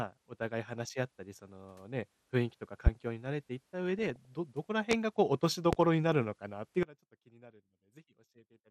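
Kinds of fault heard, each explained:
MP2 compression: Throughout the speech there is a dull, band-limited tone with a granular, gurgling grain. This plainly audible damage is likely from MPEG Layer II coding at a rate that fits an 80 kbps stream. Too few bits switch upper sub-bands off and quantise the remaining ones coarsely. Unlike DAB burbling, this damage is steady and present from start to finish, not confined to a brief burst.
Loud pop: Three single, sharp pops sit far above the speech, at 2.87 s, 4.91 s and 5.73 s, each lasting about 35 ms, with the speech carrying on underneath. Each one is likely a sudden electrical step or pulse, such as a switch, static or a driver glitch, entering the signal and being shaped by the circuits after it. Unlike burbling, each is one clean impulse with no bubbling texture.
DAB burbling: From 3.89 to 4.33 s the speech is disturbed by burbling distortion. 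Weak reception let bit errors, at a small fraction of a percent, slip past the error correction into the MP2 data, which fits around two dozen damaged frames. Corrupted samples put short blips of noise into single sub-bands, and corrupted scale factors make sub-bands jump in level for up to a frame. Unlike the steady codec dullness, it is a short, restless burst.
One channel inverted: From 6.83 s to the end, the centred speech collapses by about 24 dB when the channels are summed to mono. The cause is likely one stereo channel with reversed polarity, so the material common to both channels cancels. What remains is only the faint difference between the channels. Unlike a dropout, the sound does not stop entirely: a faint residue persists rather than silence.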